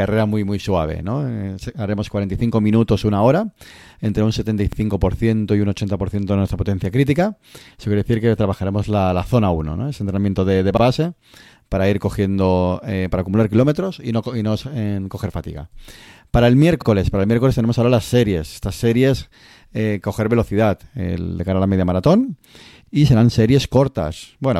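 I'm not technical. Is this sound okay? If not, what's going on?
No. The speech was handled in 6-second pieces that overlap slightly, a fault called overlapping chunks, so about 48 ms repeats at each join. You hear a small stutter at 4.73–4.77, 10.77–10.82, 16.82–16.87 and 22.87–22.92 s.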